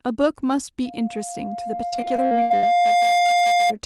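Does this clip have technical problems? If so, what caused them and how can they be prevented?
Yes. From 0.85 to 3.74 s a loudspeaker feedback squeal rises at 703 Hz. The microphone picks up its own loudspeaker, and the loop gain exceeds one at that frequency. The tone swells over roughly two seconds and ends up well above the speech. Keeping microphones away from loudspeakers, lowering gain, or notching 703 Hz would prevent it.

Between 1.75 and 2.64 s, repeated packet loss makes the sound choppy and robotic. Packets went missing again and again. Each hole was patched by stretching the last sound, with the longest gap lasting 73 ms. About 40% of the stretch is patched sound. A steadier network connection and a larger jitter buffer would prevent it.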